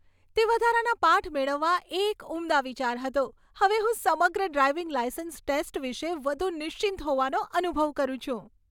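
No technical faults can be heard anywhere in the speech recording.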